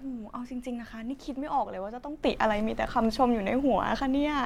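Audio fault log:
2.23–4.45 s, sudden gain jump: at 2.23 s the speech and the background noise rise together by about 10 dB from one sample to the next and stay at that level to the end, likely from a digital gain setting applied without a ramp. The noise floor lifts at the same instant as the speech. A talker speaking louder would change only the speech level, and more gradually.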